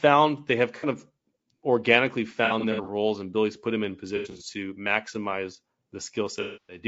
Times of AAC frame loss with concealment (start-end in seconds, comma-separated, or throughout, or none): 0.77-0.85, 2.45-2.88, 4.16-4.43, 6.41-6.79